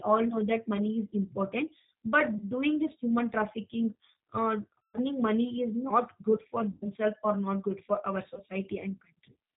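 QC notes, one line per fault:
throughout: G.729 codec. The speech passes through the 8 kbit/s G.729A coder, which discards the waveform itself and rebuilds each 10 ms frame from a vocal tract filter, a pitch predictor and a handful of pulses, so the voice comes out plainly rough and slightly synthetic. On a spectrogram everything stops at 4 kHz with empty space above, and harmonics look smeared and grainy rather than cleanly striped.
2.38 to 2.44 s, 4.80 to 4.98 s, 6.72 to 6.89 s, 8.34 to 8.40 s: VoIP packet loss concealed by the speech codec. About 20 ms goes missing just before "doing this human trafficking", 140 ms at 4.80 s, 100 ms between "good for" and "or not good for", and 20 ms right after "not good for our". In each gap the decoder repeats its last pitch and filter at falling gain, so the voice turns into a buzzy tone or a coloured noise that fades. Because every frame builds on the one before, the voice stays weak and distorted for a moment after real audio returns. 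A spectrogram shows frozen, repeated harmonics or noise that fade out, and the waveform shows a decaying envelope followed by a slow recovery.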